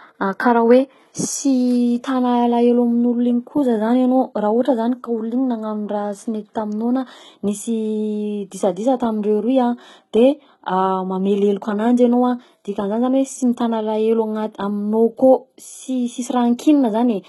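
Likely HE-AAC compression at a very low bitrate, around 16 kbps, runs through this whole speech clip: the treble is rebuilt by band replication, leaving s sounds gritty and lispy, with nothing above 11.8 kHz.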